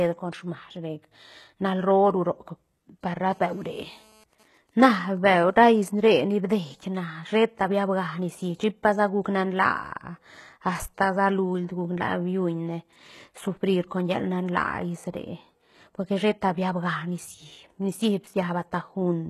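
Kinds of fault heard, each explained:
HE-AAC compression: The speech has a gritty, metallic edge in its treble, and s sounds come out lispy, with the damage heavy throughout and nothing present above 12.3 kHz. This is likely HE-AAC v2 at a very low rate, which fits something near 16 kbps. That codec keeps only the lower spectrum and fakes the treble by copying lower bands upward under a coarse envelope, so the rebuilt harmonics don't line up with the real ones.
GSM phone buzz: From 3.30 to 4.24 s a hard, raspy buzz sits about 32 dB below the speech, steady and unrelated to what is being said, pitched at 216.7 Hz with a dense stack of harmonics. A 2G phone nearby in an active call was transmitting in bursts 216.7 times a second, and the audio circuitry rectified those radio pulses into sound, giving a fixed tone with no link to the speech.
GSM signalling bursts: From 4.33 to 5.86 s the continuous buzz gives way to evenly spaced ticks with a longer burst of the same 216.7 Hz buzz twice a second, around 30 dB below the speech. 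This pattern comes from a 2G phone in a call whose user had gone silent, so it sent only short groups of radio bursts, which the audio circuit rectified into these brief buzzes.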